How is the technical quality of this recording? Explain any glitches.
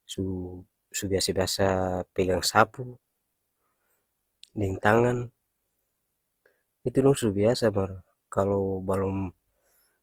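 The recording has plainly audible codec damage from start to finish. Opus compression is the likely cause. Throughout the speech, the sound turns grainy, rough and noisy. When the encoder runs short of bits, it preserves each band's energy and fills the starved bands with noise or with folded copies of lower ones. Unlike MP3, it leaves few spectral holes and little swirling. Content still reaches about 20.1 kHz, which fits a fullband music-mode encode at a low rate near 24 kbps.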